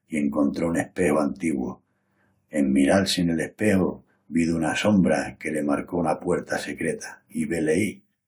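No technical faults are audible.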